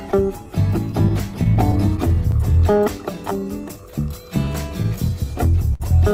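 The music carries clock drift between sender and receiver from start to finish. The sender's clock runs slow, by roughly 5 percent. Audio arrives a little late all the time. The receiver's jitter buffer keeps draining. Playback cannot hold a steady pulse. Small timing hiccups come back at uneven intervals across the whole clip.

From 0.11 to 3.33 s there are scattered short gaps. About ten packets arrive late or go missing. Each hole is tiny, around 10 ms. The receiver patches it by carrying the last sound forward. Roughly 3 percent of the stretch is filled this way. The music stays clear. You hear brief ticks and slight smears, spread thinly.

Repeated timing corrections run from 0.15 to 5.72 s. The receiver keeps repeating short pieces to make up for the slow sender. Every edit goes the same way, stretching the audio. Together they add roughly 150 ms. Playback runs at about 97 percent speed. 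The edits are unevenly spaced.

A second run of scattered short gaps falls between 4.45 and 5.82 s. This time there are about four. The longest lasts roughly 70 ms. About 7 percent of the stretch is concealed. Each patch extends the last sound. The longer ones are heard as a brief held smear where the music should move on.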